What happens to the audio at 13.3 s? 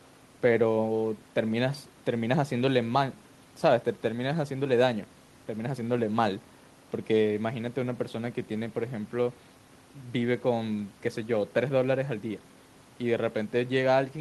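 Nothing goes wrong at 13.3 s; the speech carries on intact through that moment, with no dropout, click or distortion.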